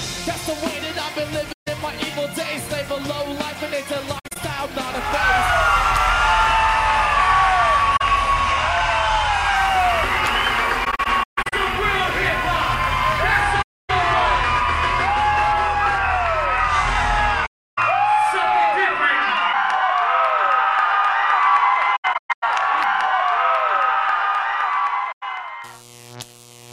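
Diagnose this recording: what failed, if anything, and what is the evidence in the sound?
Soft-edged dropouts fade the sound out and back in at 1.52–1.68, 4.18–4.37, 7.96–8.02, 10.84–11.53, 13.62–13.90, 17.46–17.78, 21.96–22.44 and 25.11–25.23 s. The 4.18, 10.84 and 21.96 s stretches are broken into several shorter holes. This is AAC frame loss with muting at the codec/network stage. Lost frames were decoded as silence, and the overlapping windows taper each gap. The hole sizes fit frames of roughly 21 ms.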